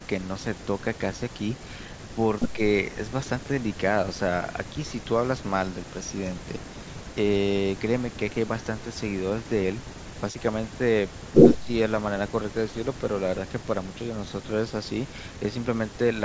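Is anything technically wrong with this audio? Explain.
Yes. From 11.56 to 11.68 s the speech briefly dips by roughly 10 dB, likely speech suppressed in double talk as an echo canceller ducked both sides. The waveform shows a short pinched trough, and the spectrogram thins there, up to the 8 kHz ceiling.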